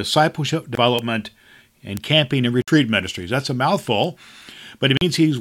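At 0.75 s the speech cuts to silence for 22 ms, then resumes. A Bluetooth stall is the likely cause: delayed packets emptied the playback buffer. At 0.99 s and 1.97 s, a bit error spike flips one sample. Each is a sharp, broadband tick. Gaps recur at 2.62–2.68 s (57 ms) and 4.97–5.01 s (40 ms). Another tick lands at 4.04 s.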